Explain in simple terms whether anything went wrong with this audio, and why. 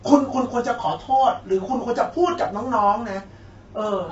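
The speech sounds rough and grainy from start to finish, with a hiss between the voice's tones and nothing above about 7.8 kHz. This is low-delay AAC compression, likely from a video-call codec, whose very short frames capture pitch poorly and squeeze the sound too hard.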